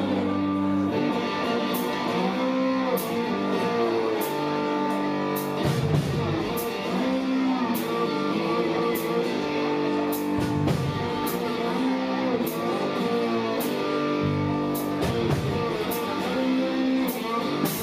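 No technical faults are audible.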